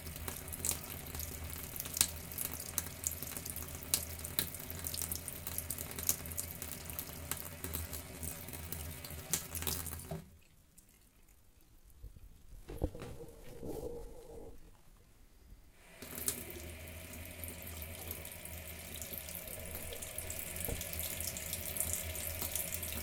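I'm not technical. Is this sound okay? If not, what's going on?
No. From 7.41 to 15.09 s the sound suddenly drags. This is a time-stretched section, likely slowed to 0.71 times normal speed while keeping the same pitch.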